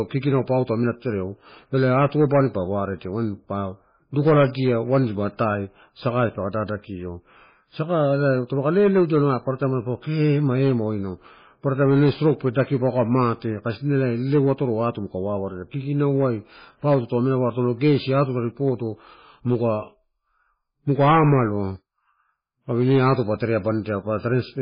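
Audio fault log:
Throughout, MP3 compression: the speech has nothing above 5 kHz and a heavily watery, swirling texture as weak frequency components drop in and out between frames, with smeared onsets. The cause is likely very low-bitrate MP3 coding, consistent with 16 kbps.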